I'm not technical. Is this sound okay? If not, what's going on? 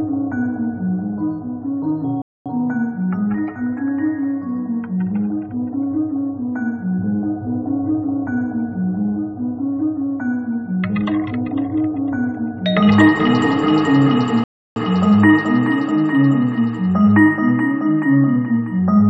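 No. The sound stops twice: from 2.22 to 2.46 seconds, and from 14.44 to 14.76 seconds. These are rebuffering stalls. The player ran out of downloaded audio and waited for more to arrive. A dropout would skip part of the sound, but here it picks up exactly where it paused, so nothing is missing. The pauses only add about a quarter and a third of a second.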